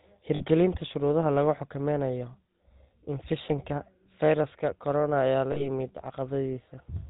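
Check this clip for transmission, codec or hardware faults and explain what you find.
Two faults are audible in this speech: coarse codec damage that lasts the whole clip, and two short dropouts patched over by the decoder.

From start to finish the speech has a buzzy, gravelly roughness, with nothing above 4 kHz. This is the GSM full-rate codec, and the damage is plainly audible. The codec models the vocal tract and drives it with a sparse, regularly spaced pulse train, keeping only every third excitation sample. That thinned excitation produces the grit, and the character fits the 13 kbps full-rate coder.

Lost GSM frames occur at 0.36 to 0.43 s and again at 5.52 to 5.67 s. Each time the sound briefly freezes into a rough, metallic ring before normal speech resumes. The decoder replaced the missing frames by repeating the parameters of the last good frame. Each gap lasts about 40 ms, which points to two lost 20 ms frames, too short for the fill to fade fully to silence.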